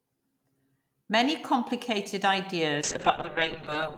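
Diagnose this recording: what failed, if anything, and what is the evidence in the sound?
Call bitrate drop at the codec, 2.82 s to the end: cut from 32 to 6 kbps, the speech turns coarse and watery, with bandwidth narrowing from 20 kHz to 8 kHz.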